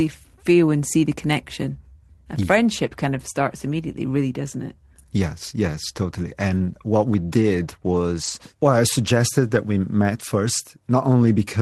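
Lost packets rebuilt from error correction at 6.49–6.59 s, 7.41–7.43 s, 8.23–8.29 s and 10.57–10.59 s: with no gaps, the low-bitrate redundant copies replace 60, 20, 40 and 20 ms, sounding briefly rougher and noisier.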